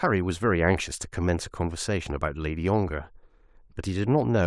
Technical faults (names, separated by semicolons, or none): none